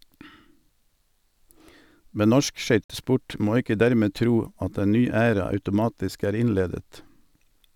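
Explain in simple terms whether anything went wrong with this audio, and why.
A Bluetooth stall cuts the speech at 2.84 s: the sound drops to silence for 55 ms, until 2.90 s, then carries on. The likely cause is radio interference delaying the wireless packets, so the headphones ran out of buffered audio and waited for resent data.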